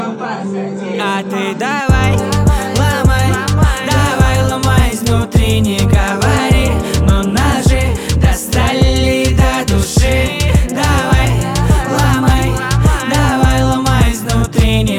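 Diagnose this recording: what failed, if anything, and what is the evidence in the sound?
Sharp single clicks at 9.85 s and 12.38 s. Likely dropped samples in the driver or buffer. A sliver vanishes, so the waveform jumps.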